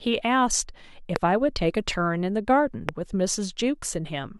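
At 1.16 to 1.18 s and again at 2.89 to 2.91 s, a loud pop cuts sharply through the speech, standing roughly 20 dB above it. A sudden voltage pulse, likely from a plug or switch, causes each pop. It shows as a narrow waveform spike and a bright vertical broadband line on a spectrogram.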